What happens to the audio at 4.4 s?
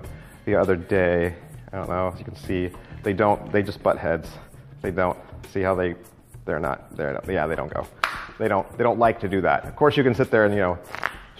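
Nothing goes wrong at 4.4 s: the audio plays through that moment intact, with no dropout, click, distortion or other fault.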